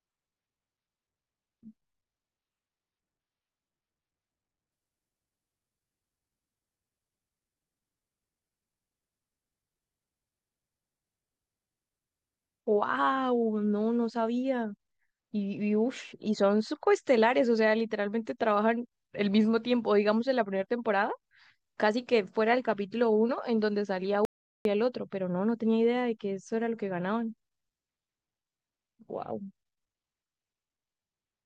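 From 4.72 to 12.72 s, the adaptive stream fell back to a lower bitrate, suggesting a very low-rate HE-AAC version. The quality changes at once, with no gap.

At 24.25 s, the input was likely lost briefly, an audio dropout to silence. The speech stops dead for 0.4 s of silence with no room tone, then resumes mid-flow.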